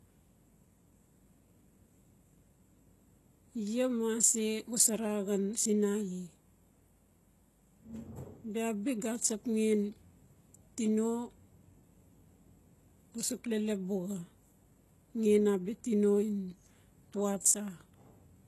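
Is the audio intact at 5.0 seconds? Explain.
No. At 5.0 seconds you're hearing the same damage that runs through the whole clip, which sounds like HE-AAC compression, likely at a very low rate, around 16 kbps. Nothing survives above 12.3 kHz, and the treble below that is synthesised by copying lower bands upward, so it doesn't line up harmonically with the real content. The s sounds come across gritty and metallic, and the artefacts are plainly audible.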